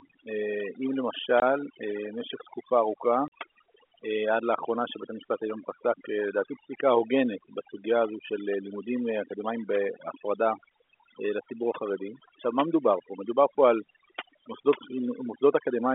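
Overdone noise removal runs through the whole speech clip. The noise reducer was set too aggressive, so it pushes individual frequency bands to near zero whenever they resemble its noise estimate and takes quiet speech detail with them. The background becomes near silence scattered with twinkling specks.

Packet loss filled with silence cuts two hard gaps into the speech: 1.40 to 1.42 s, a 20 ms hole consistent with one lost packet, and 3.28 to 3.32 s, about 40 ms, which fits two consecutive packets. The receiver substituted silence, so each gap starts and ends abruptly. The narrow telephone band of the G.711 line is audible underneath.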